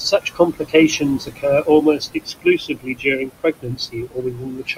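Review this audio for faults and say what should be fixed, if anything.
Noise suppressor artifacts run through the whole clip. The suppressor is pulling what it judges to be steady noise down by about 20 dB, band by band and frame by frame. The room noise, which sits about 11 dB under the speech, drops away in the gaps and comes back up under the talking. Easing the suppression depth or smoothing its gain changes over time would keep the background steadier.

Speech cut by the noise suppressor shows up twice: from 0.11 to 1.45 s, with the deepest dip around 19 dB, and from 1.62 s to the end at 4.77 s, dipping around 21 dB. The suppressor is mistaking quieter parts of the speech for noise and turning them down with the background. That adds up to roughly 0.7 s in the first stretch and about 2 s in the second, where the speech sounds swallowed or faint. A gentler threshold or a better voice-activity check would stop it clamping down on the speech itself.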